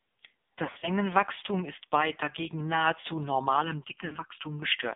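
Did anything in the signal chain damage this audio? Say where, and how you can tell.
Yes. At the codec stage, the whole clip of speech has passed through AMR narrowband mobile coding at a low rate, about 5.9 kbps, with the band limited to roughly 200 Hz to 3.6 kHz. Nothing above 4 kHz survives, so sibilants are dull and muffled. The heavy damage shows as a buzzy, synthetic quality: at this bitrate the vocal tract model and its sparse pulse excitation cannot follow the voice closely.

On the network side there are lost AMR speech frames, from 0.66 to 0.90 s and again from 4.06 to 4.17 s. In the first stretch, 120 ms of frames are missing, scattered over 160 ms, and the longest run is 60 ms. The decoder fills each gap by repeating the last good pitch and filter settings with falling gain, so the sound smears and warbles, dips toward silence, and comes back rough for a moment. The second loss is three frames, 60 ms in all.

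At playback or mixdown there is channel delay comb filtering from 3.62 to 4.62 s, starting right after "ist bei dagegen nahezu". The voice turns hollow and phasey. This fits one channel arriving a little under a millisecond late and being summed with the other. The components that cancel form evenly spaced notches, the first around 700 Hz.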